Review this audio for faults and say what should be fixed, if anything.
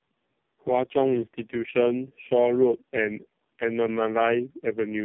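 Tandem speech coding runs through the whole clip. The speech was squeezed by one low-rate narrowband coder, then by a second one. A plain telephone-rate link sat between them. The roughness and warble fit AMR-NB at around 5 to 6 kbit/s at both ends, with G.711 in the middle. Each coder re-encodes the previous one's damage, so the errors stack. The result is muffled and gritty, with nothing above 3.7 kHz. To prevent this, use transcoder-free links so the speech is decoded only once.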